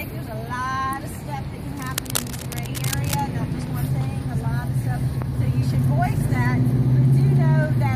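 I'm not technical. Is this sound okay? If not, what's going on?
No. A worn cable or connector was likely being moved, causing cable scratch noise: fairly loud scratchy, rustling bursts over the sound from 1.74 to 3.21 seconds.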